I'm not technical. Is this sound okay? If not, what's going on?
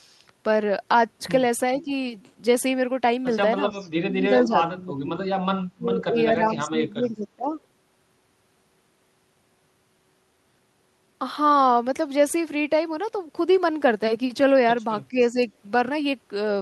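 No. Speech suppressed in double talk likely happened when both sides spoke at once, so the call's echo control turned this voice down. It dips or cuts out at 1.85–1.9, 4.04–5.2, 5.76–6.17, 6.33–7.54 and 15.1–15.37 seconds.

Echo leak means leftover loudspeaker sound likely slipped past the echo control and came back. A copy of the voice, about 0.4 seconds late, is heard at 3.71–3.9, 4.4–4.44 and 15.19–15.26 seconds.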